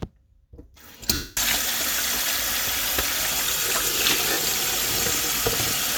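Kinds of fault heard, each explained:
Lost LE Audio frames: the decoder patches dropouts near 1.1 s and 4.3 s with recycled, sign-scrambled spectrum, so the sound smears into noise, fading during the longer 240 ms gap.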